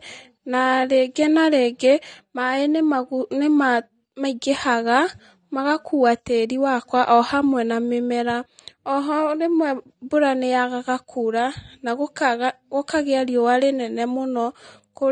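From start to finish the speech carries AAC compression damage: dull, band-limited highs with a smeared, warbling fizz on sibilants and held sounds. This is likely from AAC-LC coding at a low bitrate, plausibly around 32 kbps, where quantisation strips high bands and leaves spectral holes.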